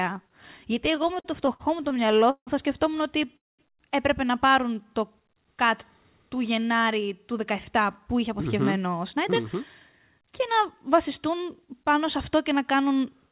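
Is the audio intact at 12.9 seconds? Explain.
Yes, the audio is intact at 12.9 seconds, with no fault occurring at that moment.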